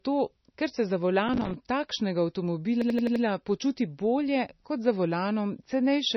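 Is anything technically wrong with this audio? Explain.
Yes, there are three problems.

Throughout the speech, the sound is dull and watery, with nothing above 5.9 kHz and a swirly, metallic quality on sibilants. This is likely MP3 compression at a very low bitrate, around 26 kbps. Starved of bits, the encoder cut the treble and dropped weak frequency components that flicker from frame to frame.

From 1.29 to 1.54 s, just after "ker se za", a gritty burst of crackle tears through the sound. This is processor overload crackle. The processor kept missing its deadlines for short audio buffers of roughly 5 ms, around fifteen in a row, and each miss left a hard-edged gap of silence.

From 2.82 to 3.24 s, just before "počuti bolje kot za", one 85 ms fragment repeats five times, giving a machine-gun stutter at 11.7 Hz. This is a system hang loop. The system froze while the audio hardware kept replaying the same ring buffer, which fits a 4096-sample buffer.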